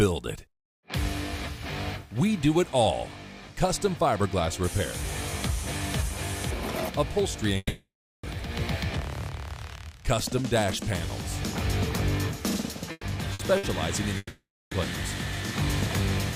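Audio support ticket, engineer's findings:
Long network dropout, 7.57 to 8.26 s and 14.17 to 14.74 s. Likely a network path stall. No packets reach the receiver, so concealment extends the last sound as a fading buzz or hiss, then goes to silence: about 400 ms of the first 660 ms gap and about 320 ms of the second 540 ms gap. Playback resumes later in the stream, and that content is lost.

Burst of packet loss, 12.91 to 13.06 s (120 ms), 13.33 to 13.42 s (60 ms) and 13.57 to 13.66 s (60 ms). Consecutive packets are dropped or arrive too late for the jitter buffer. Each gap is concealed by repeating the preceding sound at falling level, heard as a brief held buzz or fading hiss. The first burst runs down to about 30 ms of silence before playback resumes, with the missing audio skipped. Three bursts within about 0.75 s point to a congested or unstable link just before the second dropout.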